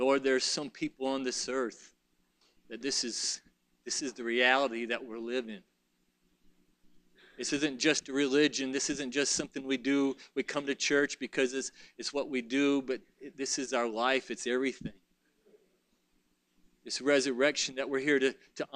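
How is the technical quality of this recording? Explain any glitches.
No faults or glitches are audible.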